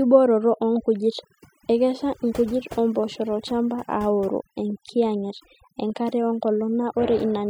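Throughout, the background drops and breaks up into twinkling specks: overdone noise removal, cutting bands near the noise estimate.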